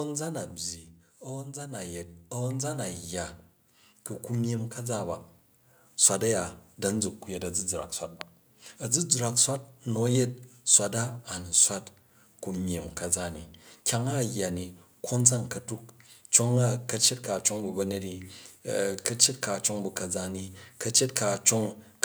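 From 0.05 to 1.04 s, automatic gain falling pulls the speech and its background down together by about 5 dB, the waveform envelope tapering steadily across that second. Automatic gain rising then lifts everything by about 10 dB between 1.23 and 7.13 s, a slow swell visible as a widening envelope and brightening spectrogram, background included. At 8.21 s a single loud pop, likely a brief voltage spike from a plug, switch or static, cuts through the speech. It peaks roughly 15 dB above the signal and shows as a thin vertical broadband line on the spectrogram.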